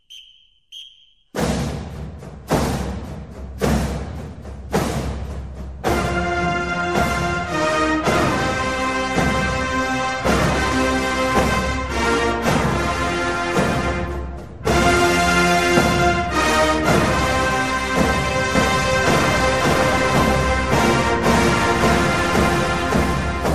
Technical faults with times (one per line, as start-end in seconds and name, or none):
0.00-23.54 MP2 compression
2.34-2.75 DAB burbling
11.32-11.57 DAB burbling
18.55-23.54 doubled audio track